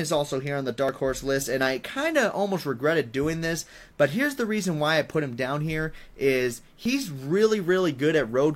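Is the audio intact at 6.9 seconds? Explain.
No. Right after "him down here is", from 6.86 to 6.89 s, an overlap between stream segments cuts away about 36 ms, so the waveform jumps, heard as a tiny skip, rather than leaving a silent gap.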